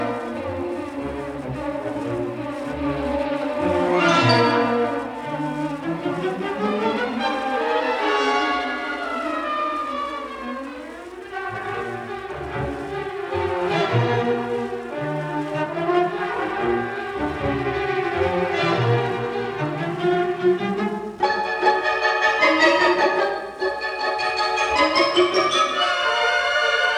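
No technical faults can be heard anywhere in the clip.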